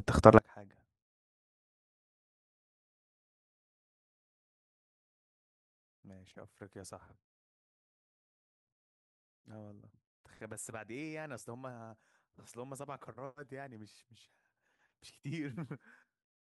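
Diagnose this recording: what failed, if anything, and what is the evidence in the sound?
From 0.39 s to the end at 16.41 s, the speech collapses to a faint residue about 29 dB below its normal level when heard in mono, with the centred body of the voice almost gone. The likely cause is one channel inverted: one leg of the stereo pair has reversed polarity, probably from swapped conductors in the analogue wiring, so the matching centre content cancels on summing and only the small inter-channel difference survives.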